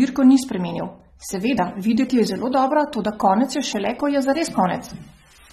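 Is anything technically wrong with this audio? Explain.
Yes. Throughout the speech, nothing exists above 13.8 kHz, and sibilants sound dull and fizzy. This is likely AAC compression, consistent with roughly 32 kbps, leaving a hard spectrogram ceiling.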